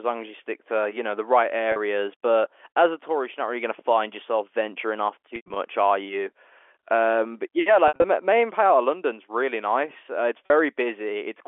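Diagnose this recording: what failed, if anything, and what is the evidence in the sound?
The failure is in the network: packet loss with pitch repetition, heard through the narrow 300 Hz to 3.4 kHz telephone band of the G.711 line. Brief 40 ms gaps at 1.72–1.76 s and 10.46–10.50 s come out as a slightly held, buzzy tone, which fits two consecutive 20 ms packets lost. Longer scattered losses at 5.36–5.56 s and 7.88–8.04 s fade toward silence before the speech cross-fades back. The receiver concealed each gap by looping the last pitch period.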